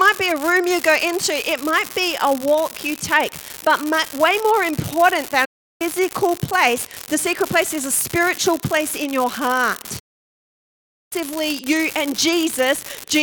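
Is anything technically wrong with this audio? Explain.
Yes. A steady crackling fizz runs through the whole clip, even in pauses. This is an unreliable data bit: one marginal data line flips a bit in random samples, each error making an identical spike.

The sound cuts to silence with a fade of about 8 ms from 5.45 to 5.82 s and again from 9.99 to 11.13 s. These are digital broadcast dropouts, where the receiver lost the signal or rejected corrupted frames and muted, so about 0.35 s and 1.1 s of programme are gone.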